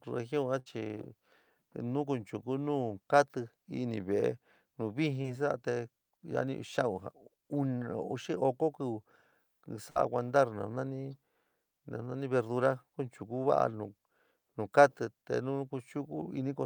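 This speech clip has two bursts of packet loss and one short concealed packet loss. In each burst, a run of packets failed to reach the receiver in time, around 60 ms of audio in total. The receiver extended the last sound and faded it, then resumed further on, with the lost stretch skipped. The first burst falls at 0.59 to 0.68 s, right after "ugion a", where about 63 ms of synthetic continuation fills the gap. The second, at 9.90 to 9.98 s, is about 57 ms of fill. Both are heard as a brief held, decaying sound followed by a jump in the speech. At 5.22 to 5.26 s, a short concealed packet loss dropped about 20 ms. The decoder bridged it with roughly 22 ms of extrapolated sound and blended back into the real signal, leaving a brief smear or wobble.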